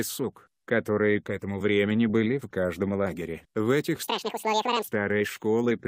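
From 4.03 s to 4.88 s the audio plays back at twice its speed and an octave higher, 12 semitones up, the sign of audio read two samples at a time (double speed). The reader treats each pair of samples as a single frame, so the material flies past in half the time it should take. On a spectrogram the harmonics in this stretch sit twice as high and twice as far apart. The waveform's shapes look squeezed to half their width.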